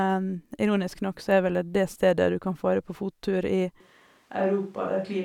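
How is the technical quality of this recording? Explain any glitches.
There's one real glitch, and it's near the end. Right after "fare på fottur i", at 3.80 s, the speech suddenly turns roomy and hollow, loses its low end, and drops by about 5 dB, and it stays that way to the end. That's a switch to a distant microphone, most likely the close mic cutting out and the recording falling back on one further away. A bit more room noise creeps in too, though it sits roughly 40 dB under the speech.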